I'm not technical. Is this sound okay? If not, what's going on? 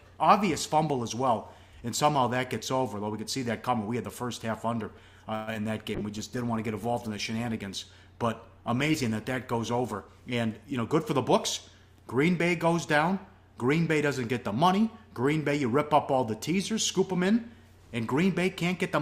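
No. A call audio freeze at 5.35 to 5.49 s stretches the last sound into a fading buzz or hiss for about 0.12 s, likely because delayed data ran the receiver dry.

Short concealed packet loss at 5.53 to 5.56 s: a few hundredths of a second went missing, and the receiver patched it with a brief smear.

Call bitrate drop from 5.96 to 10.10 s: the connection weakened, so the sound was squeezed into far less data and turns rougher and duller until recovering.

Jitter buffer speed-up from 10.50 to 11.57 s: the receiver trimmed roughly a tenth of a second of backlog, so the audio runs about 9% faster at unchanged pitch.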